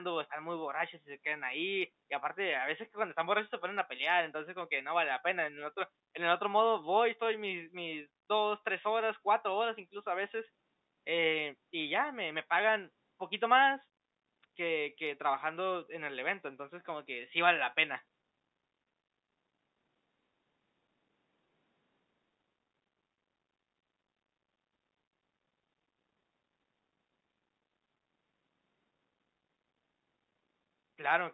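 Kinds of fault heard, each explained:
No faults can be heard.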